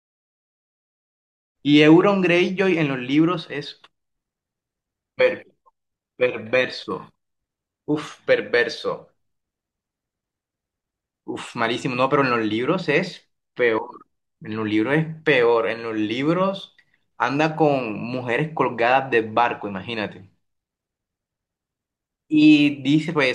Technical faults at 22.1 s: none

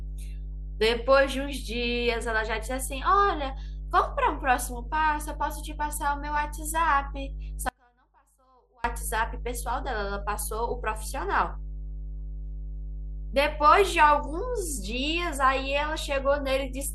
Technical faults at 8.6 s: mains hum; audio dropout to a faint residue

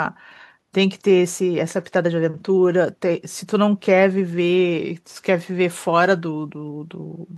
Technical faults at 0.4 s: none

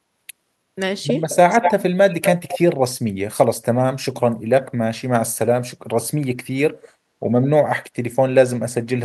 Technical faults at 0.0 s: none

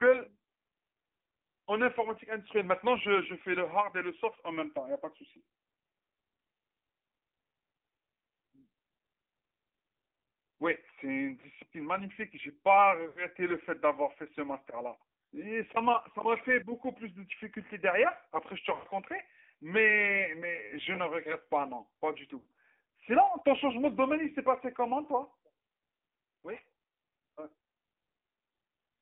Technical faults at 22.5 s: AMR narrowband mobile codec; lost AMR speech frames

